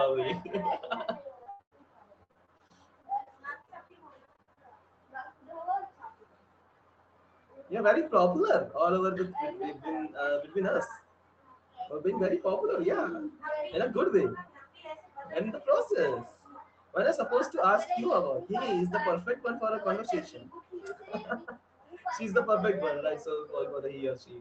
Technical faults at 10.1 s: none

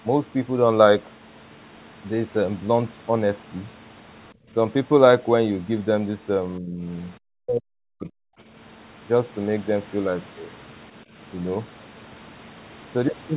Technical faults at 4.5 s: background gated by the echo canceller

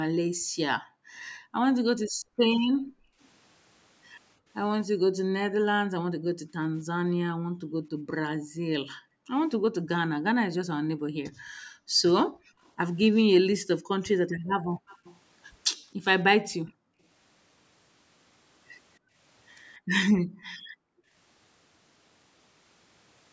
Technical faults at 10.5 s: background gated by the echo canceller

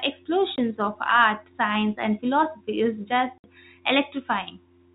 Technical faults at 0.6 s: packet loss filled with silence

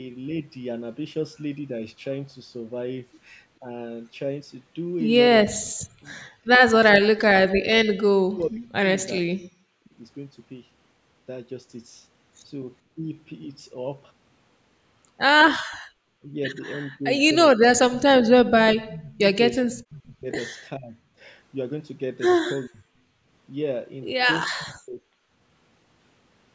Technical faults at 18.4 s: speech suppressed in double talk

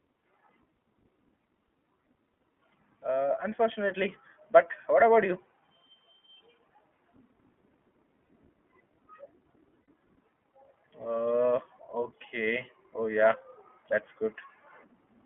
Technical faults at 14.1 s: iLBC codec

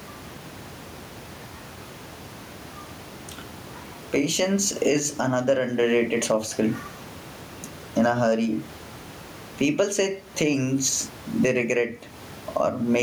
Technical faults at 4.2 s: gain pumping

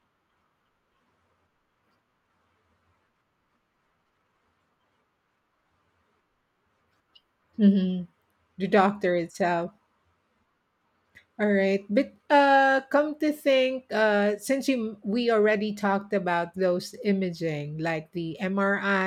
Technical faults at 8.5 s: none

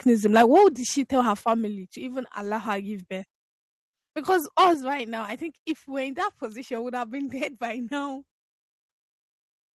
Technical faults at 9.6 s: none

